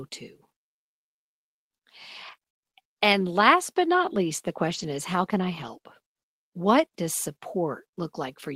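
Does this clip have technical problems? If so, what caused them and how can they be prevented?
Yes. From 2.27 to 3.14 s, just before "last but not least", there is repeated packet loss (robotic sound). Six short gaps, the longest 20 ms, are patched by stretching the previous sound. The result is choppy, with pieces missing. A steadier network path and a larger jitter buffer would prevent this.

From 4.70 to 4.84 s, between "but not least the" and "is how can I", there is a lost packet rebuilt from error correction. About 80 ms is played from low-bitrate backup copies, which fits four separate lost packets. There is no gap, but that stretch sounds rougher and noisier. Reducing packet loss on the link would prevent this.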